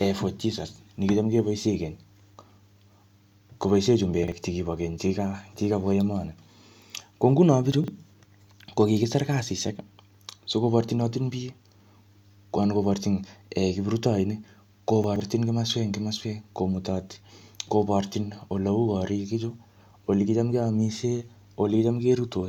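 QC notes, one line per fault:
4.24–4.32 s, 7.72–7.88 s and 15.04–15.2 s: chunks out of order. A 40 ms chunk plays late, one chunk behind just before "chekibo keny" and three chunks behind at 7.72 and 15.04 s, so a brief scramble is heard with three hard joins. Unlike a dropout or a stutter, no audio goes missing and none repeats. The same material is there, but in the wrong sequence.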